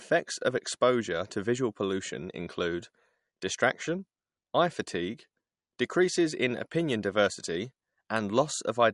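Throughout the speech, likely MP3 compression at a low bitrate, around 48 kbps: nothing above 11.1 kHz, sibilants chirp metallically, and weak detail swirls watery between frames.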